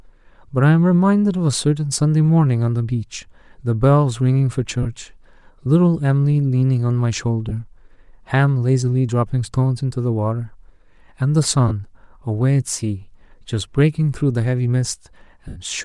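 Throughout the speech, upper frequencies are thinned and replaced with a grainy, breathy hiss, which is likely Bluetooth LC3 compression at a bitrate low enough to discard detail plainly.

Lost LE Audio frames occur at 4.83 to 4.87 s, 7.49 to 7.52 s, 11.68 to 11.72 s and 15.48 to 15.58 s. Each time the decoder repeats the last spectrum with scrambled phase, so the speech smears into noise for about 20, 20, 30 and 80 ms respectively. The longest gap fades.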